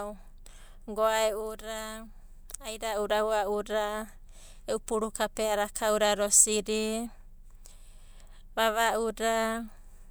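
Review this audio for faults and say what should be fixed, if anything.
No faults turn up in this audio, so nothing needs to be fixed.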